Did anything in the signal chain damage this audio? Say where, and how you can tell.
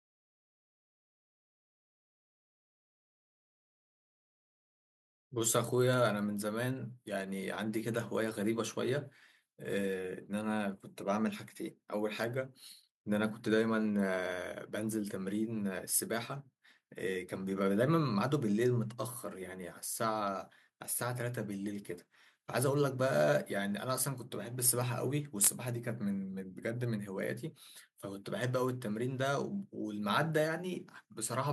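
No, nothing along the chain has left a mark on this speech recording that I can hear, so there's no damaged stage to point to.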